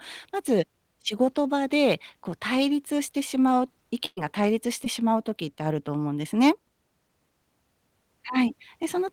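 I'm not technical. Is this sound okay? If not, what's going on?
No. At 4.05 to 4.19 s the speech stretches into a held, fading sound, goes briefly silent, then jumps ahead. That's a burst of packet loss: about a tenth of a second never arrived, so the receiver padded the gap and skipped on.

At 4.85 to 4.88 s there's a quick smear or wobble. That's a short concealed packet loss: a sliver of the call went missing and was patched over.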